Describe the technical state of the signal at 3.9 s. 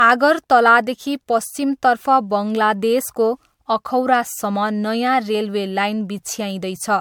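Generation loss runs through the whole clip, 3.9 s included: the speech sounds swirly, smeared and hollow, with blurred attacks, likely from about four successive MP3 passes near 100 kbit/s, each requantising on a shifted frame grid so noise and spectral holes accumulate.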